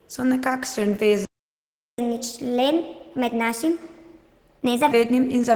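The whole clip carries plainly audible Opus compression damage, a muffled, hoarse, grainy quality that fits a low rate of around 16 kbps in hybrid mode. At 1.25 s the audio cuts out for about 0.73 s until 1.99 s, a playback stall, likely from the player running dry. From 1.99 s to 4.91 s there's catch-up at higher speed: everything plays 1.25 times fast, about four semitones sharp, then settles back.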